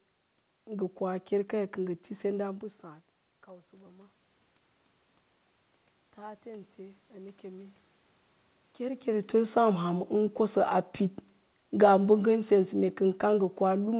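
From 3.47 to 4.22 s the automatic gain rising is audible: after the level at the microphone drops by about 19 dB, the gain control creeps upward by about 3 dB over three-quarters of a second. It happens again from 6.16 to 7.85 s, this time a slower climb of about 4 dB. What separates this from the talker shifting position, as happens near 2.5 s, is that the room noise swells along with the speech, since the whole signal is being boosted.

From 11.68 s to the end at 13.99 s the opposite occurs: automatic gain falling. The gain control judges the input too loud, or its background noise too strong, and pulls the level down gradually, so the speech starts out loud and then sinks, with the background sinking at the same pace. The talker moving around 8.5 s changes only the speech level, not the noise beneath it. Throughout, the audio is band-limited to 4 kHz with the grainy coding noise of a telephone-grade call path, which fits G.711 A-law at 64 kbps.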